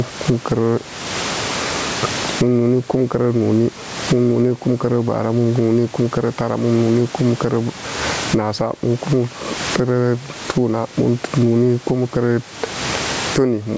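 In this speech recording, the input gain was likely set far too high, so a fast limiter clamps down on every loud syllable. The result is gain pumping throughout: the gain swings by roughly 25 dB, leaving the level squashed.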